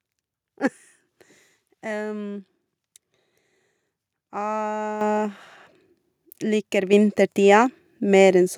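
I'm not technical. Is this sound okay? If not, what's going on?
No. The clip has a microphone volume stepped up fault, twice: at about 5.01 seconds and again at 6.93 seconds. Each time, the speech and the background noise jump louder together, all at once. That happens when the calling software decides the microphone is too quiet and turns up its input level in a single step rather than gradually. The first jump is the bigger one; the second adds a smaller boost on top.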